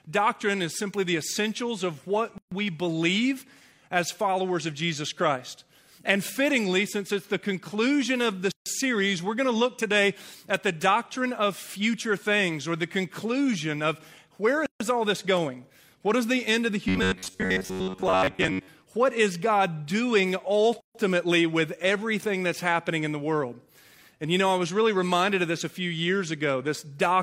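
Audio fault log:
2.38 s, 8.52 s, 14.66 s, 20.80 s: gap at a join of encoded pieces. Silences of about 0.14 s (137 to 144 ms) recur every 6 s. The pieces were encoded separately and joined untrimmed, so encoder start delay and last-frame padding remain. The edges are smeared by the codec, and the sound resumes where it stopped.
16.89 to 18.68 s: robotic sound from repeated short buffers. The sound becomes a rigid metallic buzz near 94 Hz. This is likely caused by a segment of about 10.7 ms being replayed while fresh audio arrives too seldom, skipping most of the real sound and imposing that fixed pitch.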